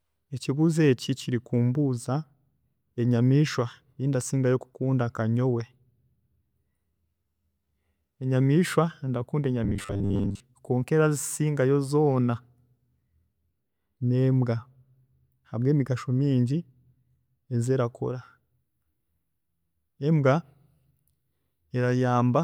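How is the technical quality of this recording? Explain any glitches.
One glitch stands out in this speech recording. From 9.64 to 10.40 s, the voice turns robotic. It becomes a rigid, metallic buzz at 100 Hz. The likely cause is repeated short buffers. Audio arrived too seldom, so a 10 ms slice was looped to fill most of that stretch. The real audio was skipped.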